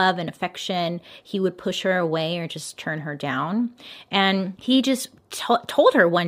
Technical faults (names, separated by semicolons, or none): none